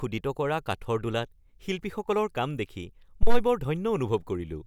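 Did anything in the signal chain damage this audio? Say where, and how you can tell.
Yes, there's a phantom power thump at 3.23 to 3.43 s, and it belongs to the analogue wiring stage, right at the mic input. You hear a deep, low thud that peaks around -10 dBFS and dies away fast, with a decay of roughly 47 ms. That's a supply voltage being switched on a live input. The sudden DC step pushes through the coupling capacitors and comes out as a single low-frequency bump.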